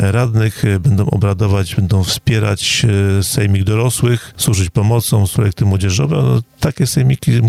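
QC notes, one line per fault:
Throughout, gain pumping: the level rises and falls with the loudness of the sound, with a swing of around 10 dB. Peaks and quiet passages sit unnaturally close in level, giving a flattened, squashed character. The likely cause is input gain set well above what the microphone needs, with a fast limiter or compressor clamping down on every loud sound.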